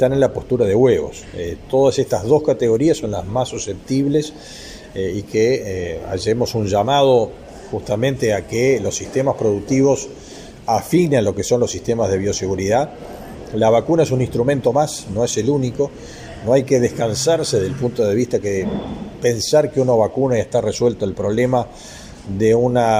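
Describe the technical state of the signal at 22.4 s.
At 22.4 s the signal is intact, with no audible dropout, distortion, clipping or other fault at that moment.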